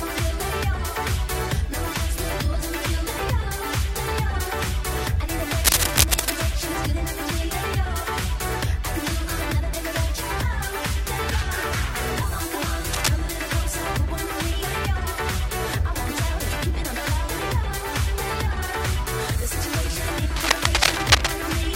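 Three bursts of cable scratch noise: 5.64 to 6.37 s, a short one at 12.93 to 13.10 s, and 20.36 to 21.32 s. Each is a dense, ragged rustle sitting right on top of the sound, roughly as loud as the signal itself, and the last one is a touch louder still. The likely cause is a worn cable or connector being moved, so the contact resistance flickers and sprays uneven noise into the audio.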